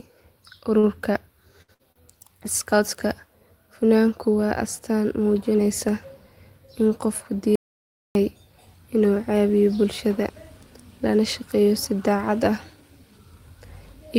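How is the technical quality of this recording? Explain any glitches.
The recording has clear network and input faults: two short stalls, two bursts of packet loss close together, and one full dropout to silence.

Short stall from a late packet, at 0.79 to 0.86 s and 1.92 to 1.99 s: a packet arrived late, the jitter buffer emptied, and the last sound was stretched for about 38 ms and 36 ms before resuming where it left off. Nothing is lost, but the sound hangs with a faint buzz or dip. A spectrogram shows flat, smeared harmonics.

Burst of packet loss, at 1.62 to 1.71 s and 1.74 to 1.82 s: each time about 60 ms of speech went missing. The receiver extended the last sound for roughly 55 ms and faded it, and then jumped ahead. A spectrogram shows repeated, decaying bands followed by an abrupt change.

Audio dropout to silence, at 7.56 to 8.15 s: about 0.6 s of the input vanished and was written as silence, likely because of a lost link or a momentary mute. 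The speech cuts off mid-flow and comes back abruptly. The waveform is a dead-flat line and the spectrogram is fully black, with no room tone.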